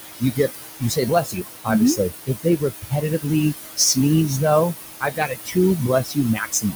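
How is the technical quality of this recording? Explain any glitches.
The recording has two faults, both from a noise suppressor struggling with room noise that sits only about 7 dB below the speech.

Noise suppressor artifacts, throughout: the suppressor pulls down whatever bands it judges to be steady noise, frame by frame, by about 17 dB. The background dips in the gaps and returns under the speech.

Speech cut by the noise suppressor, at 0.19–0.52 s, 0.79–1.69 s, 1.96–3.26 s, 5.01–5.57 s, 5.88–6.18 s and 6.35 s to the end: quiet parts of the speech were mistaken for noise and dropped by about 16 to 20 dB. For roughly 150 to 500 milliseconds in each span, sounds come across as swallowed or faint.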